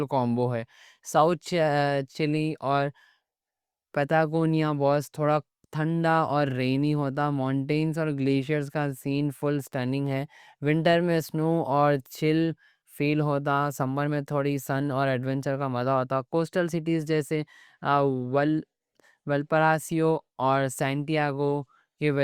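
No technical faults can be heard anywhere in this speech recording. Nothing in the signal breaks off, stalls or shifts in character at any point.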